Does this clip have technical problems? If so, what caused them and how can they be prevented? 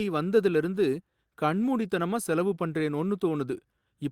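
Yes. There's clock drift between sender and receiver running through the whole clip. The sender's clock ticks about 4% slower than the receiver's, so the jitter buffer keeps draining faster than it gets refilled. The receiver has to stretch things out to avoid running dry, so playback runs a touch slow. Preventing it means having the receiver estimate the clock offset and resample smoothly to match the sender's rate.

That drift shows up as repeated timing corrections from about 0.04 s to 3.81 s. The receiver keeps repeating short slivers of audio to fill the gap, all in the same direction but at irregular spacing, and together they add something like 150 ms over the stretch, with playback running at 96% speed. Each edit is tiny, so it comes across as little hiccups and a wobbly tempo rather than obvious glitches. Swapping crude repeat-and-cut edits for continuous, gentle rate adjustment would hide these corrections.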